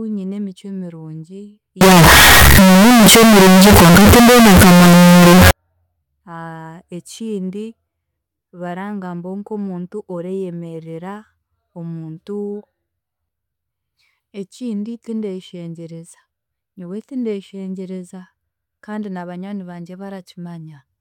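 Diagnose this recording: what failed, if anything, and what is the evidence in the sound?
From 1.81 s to 5.51 s the speech turns into a wall of very loud, harsh distortion, and the quieter stretches are blasted up to the same level as the rest, so normal dynamics disappear. The likely cause is a sample-format conversion fault where signed and unsigned were mixed up, consistent with 16-bit samples. Flipping the top bit makes every zero crossing leap across the full range, which explains the uniform harshness.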